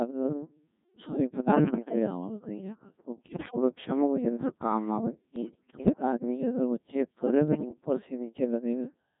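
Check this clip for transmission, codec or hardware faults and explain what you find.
Two faults are present: a very low-rate vocoder across the whole clip and four short bursts of digital radio bit errors.

Throughout the clip's speech, the sound is robotic and buzzy, with no natural texture. This is the Codec 2 vocoder, heavily degraded. It rebuilds the voice from sine waves using only pitch, voicing, energy and spectral-envelope data, which fits its 1.6 kbit/s mode.

From 1.43 to 1.95 s (just before "आवाज कहीं जाकर तो"), 3.28 to 3.56 s, 5.36 to 6.02 s (between "वो यंटर काम आवाज" and "आदमी जाकर वो चेक"), and 7.48 to 7.73 s (just after "आदमी जाकर वो चेक"), the speech breaks into warbles, bleeps and jumps in pitch and level. These are bit errors on digital voice radio. Flipped bits corrupt entire vocoder frames, at error rates of several percent up to around fifteen percent in the 3.28 s burst.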